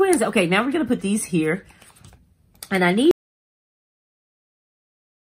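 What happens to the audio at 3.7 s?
At 3.7 s the audio is inside an audio dropout to silence. It begins at 3.11 s and runs to the end. The sound stops abruptly and leaves silence, with no room tone. The input was likely lost while recording continued writing silence.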